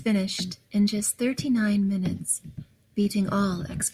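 Nothing in the recording stood out as a technical problem on listening.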